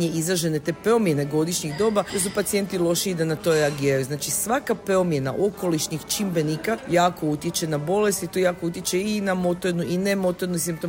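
No technical faults are audible.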